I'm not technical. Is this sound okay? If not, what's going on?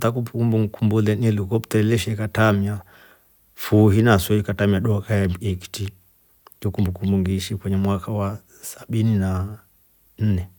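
Yes, nothing wrong can be heard in this recording.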